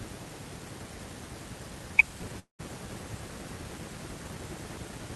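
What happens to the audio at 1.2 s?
Nothing goes wrong at 1.2 s: the speech runs on intact through that moment, with no dropout, click, distortion or other fault to be heard.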